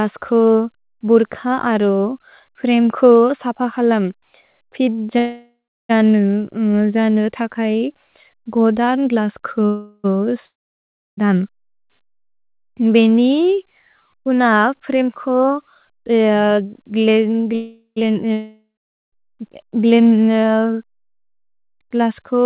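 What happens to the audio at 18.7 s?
At 18.7 s you're in the middle of a long network dropout, running from about 18.32 to 19.14 s. Audio most likely stopped arriving, so the receiver stretched the last sound into a fading buzz, then went silent for nearly half a second before speech resumed with that chunk gone.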